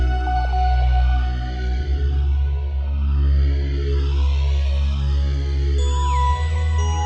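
No technical faults can be heard anywhere in the signal.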